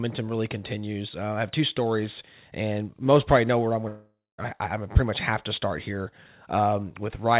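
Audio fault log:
3.88–4.40 s, long network dropout. Right after "probably know where I'm", half a second of sound goes missing. The receiver stretches the last sound into a fading buzz, then leaves about 0.22 s of silence. The likely cause is lost packets, and the missing part never returns.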